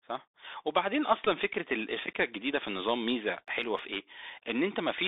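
Speech heard through a Bluetooth CVSD headset codec, with the damage plainly audible all the way through. The band sits at roughly 200 Hz to 3.7 kHz, and the one-bit delta coding, which fits a 64 kbit/s link, adds a granular hiss and scratchy sibilants where loud high sounds outrun the adaptive step. That grainy overload, rather than the smooth muffling of an ordinary band limit, marks it as CVSD. At 1.25 s a Bluetooth headset packet repeat replays about 15 ms of audio. Because the same short chunk is decoded again every 3.75 ms, this comes out as a brief buzz near 267 Hz rather than a gap or a single click, which fits around four lost packets in a row. Between 3.48 and 3.94 s there are four CD scratch ticks, each about a millisecond or less, recurring at roughly six or seven a second. Their steady rhythm comes from a disc flaw passing the laser once per revolution, and the player interpolates or mutes each bad spot, leaving an instant tick rather than a pitched buzz.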